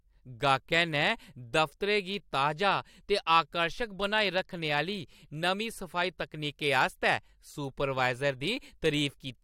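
Nothing in the speech recording stands out as a technical fault; the signal holds steady throughout, with no audible disturbance anywhere in the clip.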